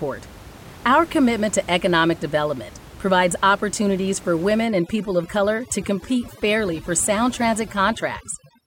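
From 4.64 s, just after "development provides opportunities for", and running to the end of the clip, the speech shows overdone noise removal. The suppressor is set so aggressively that frequency bands sitting near its noise estimate are pulled right down, and the softer parts of the voice are cut along with them. The room noise, about 19 dB under the speech, drops and breaks up into twinkling specks.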